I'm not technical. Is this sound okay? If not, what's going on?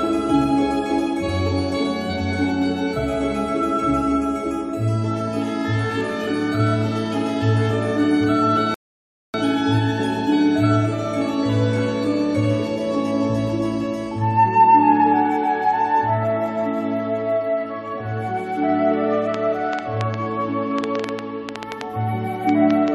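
No, two things stand out. At 8.74 s there's a rebuffering stall: the player ran dry and went silent for about 0.6 s, then carried on exactly where it left off, so nothing's missing. From 19.34 s to 22.89 s there's a train of clicks, around twenty uneven ticks at roughly five a second, likely from nearby electrical interference or a faulty connection or power supply.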